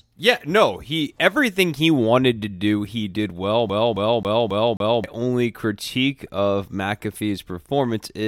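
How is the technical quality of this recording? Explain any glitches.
The speech carries one clear glitch. From 3.69 to 5.04 s, the same 0.27 s fragment repeats five times in a fast, even stutter, with a brief mute at each jump. This is a CD stuck on one turn: a scratch throws the laser back one track on every rotation.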